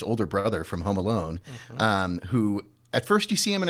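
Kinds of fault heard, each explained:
Short stall from a late packet: right around 0.39 s the speech briefly hangs, because a packet showed up late and the jitter buffer ran dry. The receiver covered the gap by stretching the last bit of sound for about 51 ms, then picked up exactly where it left off at 0.46 s, so nothing's actually lost. You just hear that sound held a touch too long, and everything after runs about 51 ms later.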